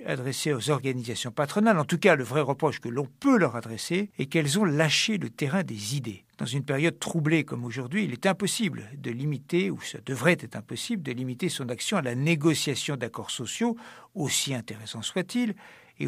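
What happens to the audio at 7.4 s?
Nothing goes wrong at 7.4 s: the speech there plays through intact, with no dropout, click, distortion or other fault at that moment.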